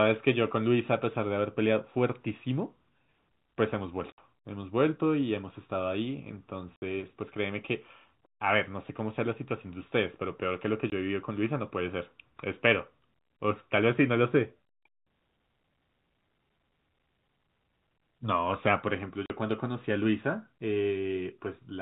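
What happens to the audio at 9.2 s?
Nothing goes wrong at 9.2 s: the speech carries straight through that moment intact, with only the steady narrowband character of telephone coding and no break, click or distortion.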